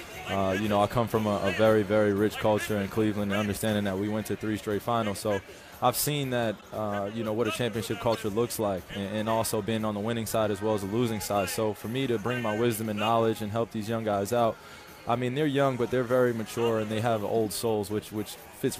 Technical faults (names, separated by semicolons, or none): corrupt frame decoded